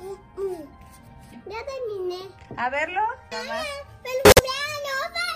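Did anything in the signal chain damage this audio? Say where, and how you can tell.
Yes. At 4.25 s the sound cuts abruptly to dead silence for about 0.17 s, resuming at 4.41 s with timing intact. This is a corrupt frame muted fault in the codec stage: bit-flipped compressed frames failed decoding, and the player substituted silence, a gap that fits roughly three frames.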